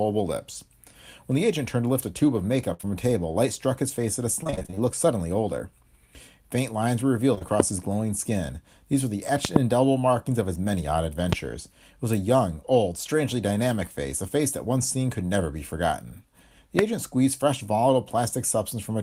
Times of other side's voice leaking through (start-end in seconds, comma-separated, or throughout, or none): none